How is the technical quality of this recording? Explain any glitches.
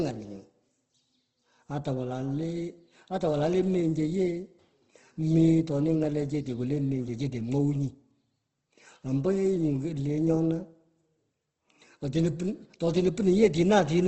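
The recording carries audible compression damage from start to finish, with no other faults. Throughout the speech, nothing reaches above 8.2 kHz, and voiced sounds turn rough and grainy. This is likely Opus compression at a low bitrate, around 16 kbps, with the encoder filling starved bands from folded lower content or noise. Unlike MP3 damage, it leaves few spectral holes, so there is little swirling or warbling.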